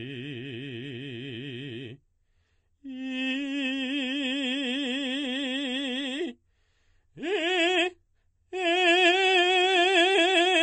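Throughout the music there is a watery, swirling quality, with attacks smeared and nothing above 8.3 kHz. This is likely MP3 compression at a very low bitrate, which fits about 32 kbps: the encoder drops the treble and lets weak frequency components flicker between frames.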